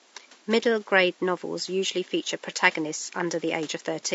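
Across the whole clip the speech sounds rough and grainy, with noise between the harmonics and a dull, artificial top end, while the room noise sits about 29 dB below it. The likely cause is low-delay AAC compression, AAC-ELD, whose short frames resolve pitch poorly, at a bitrate that fits roughly 32 kbps.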